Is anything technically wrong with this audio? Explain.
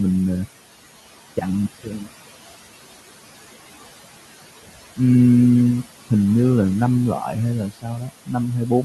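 Yes, there are two related problems, both from noise suppression.

Noise suppressor artifacts run through the whole clip. The suppressor pulls down whatever bands it decides are steady background, by about 16 dB, and it does this frame by frame. The room noise, which sits about 17 dB under the speech, ends up pumping, dropping away in the gaps and creeping back in under the talking.

Speech cut by the noise suppressor shows up between 7.7 and 8.1 s. Here the suppressor treated part of the speech as noise and turned it down along with the background, by about 14 dB at the deepest point. In total about a third of a second is affected. The quieter parts of that stretch come across swallowed and faint, as if the ends of the sounds just sink into the floor.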